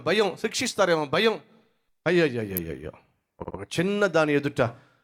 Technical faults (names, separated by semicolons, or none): electrical switching spike; repeated frames